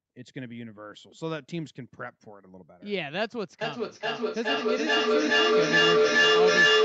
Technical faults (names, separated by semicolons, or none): feedback howl